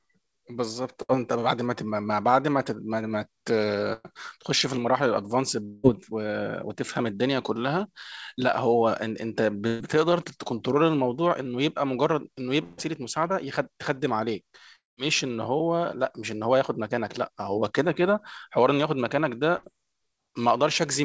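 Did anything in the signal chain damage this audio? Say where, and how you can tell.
Yes. The damage happened on the network, after the call codec. The speech carries five bursts of packet loss: 1.02 to 1.11 s, 3.93 to 4.13 s, 9.67 to 9.82 s, 12.64 to 12.80 s and 19.57 to 19.65 s. Each one loses 60 to 140 ms of audio. The receiver fills each hole by stretching the last sound and fading it down. You hear a short held buzz or a fading hiss. Then the speech jumps ahead, with the missing stretch gone.

Two longer gaps sit at 5.65 to 5.85 s and 14.76 to 14.99 s. The first loses about 180 ms and is covered entirely by the fading fill. The second loses about 220 ms. The fill dies out early there, leaving about 170 ms of silence before the speech resumes further on. These are too long for a few dropped packets. The likely cause is a long network dropout, where nothing arrived at all for that stretch.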